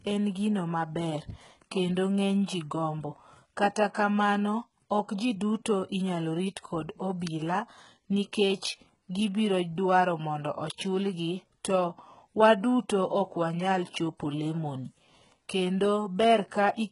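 Throughout the speech, the treble sounds synthetic, with s sounds turning gritty and lispy and nothing above 11 kHz. This is likely HE-AAC compression under heavy strain, consistent with about 12 kbps, rebuilding the top band from copied lower harmonics that don't line up.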